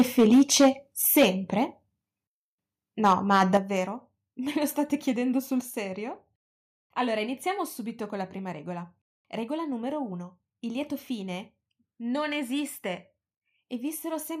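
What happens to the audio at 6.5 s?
Nothing goes wrong at 6.5 s; the speech there continues cleanly without any dropout, glitch or other fault.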